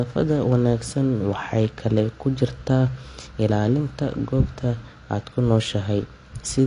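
From start to finish the speech is dull, with nothing above 10 kHz, and sibilants carry a warbling, swirly fizz, likely from AAC compression at a bitrate that sounds near 32 kbps. Starved quantisation smears frames, and that shimmer sets it apart from a simple low-pass filter.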